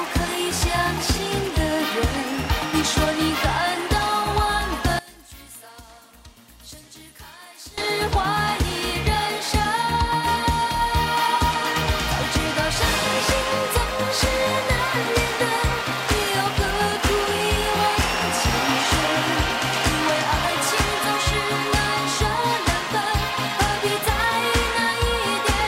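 From 4.99 to 7.78 s the sound drops by about 21 dB. One channel inverted likely caused it, cancelling shared content.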